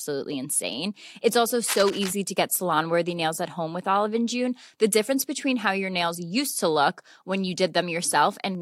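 Cable scratch noise runs from 1.64 to 2.13 s, a dense rustling burst about 10 dB below the speech, likely from a worn connector shifting contact resistance.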